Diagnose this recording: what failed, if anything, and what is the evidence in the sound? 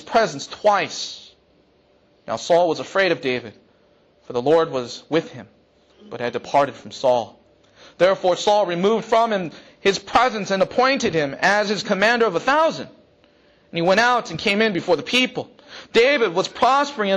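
Nothing here points to a failure at any stage of the chain, so there's no fault to diagnose and no evidence to chase.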